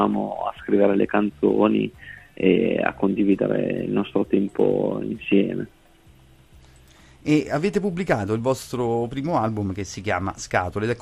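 Throughout, the sound is dull and gurgling with a granular edge as upper bands flicker away, likely MP2 compression starving its sub-bands, consistent with roughly 80 kbps.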